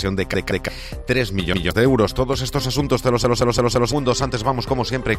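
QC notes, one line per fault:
0.34–0.68 s, 1.54–1.71 s, 3.24–3.93 s: repeated buffer. The same 170.67 ms segment, which fits an 8192-sample buffer, replays 2, 1 and 4 extra times with a hard join at each repeat. The result is an audible stutter rather than silence or a click, and roughly 0.3, 0.15 and 0.7 s of new audio is lost.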